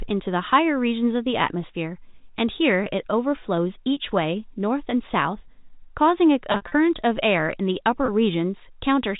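At 2.84 to 2.86 s and again at 8.06 to 8.08 s, packet loss with pitch repetition leaves a brief held, buzzy sustain, each gap fitting a single lost 20 ms packet that the receiver bridged by repeating the last pitch period. Between 6.52 and 6.72 s the losses scatter across 200 ms, about 120 ms missing with runs up to 60 ms, so the speech briefly turns droning before fading and cross-fading back over the narrow G.711 telephone band. A plain dropout would leave silence or a click instead of this tonal smear.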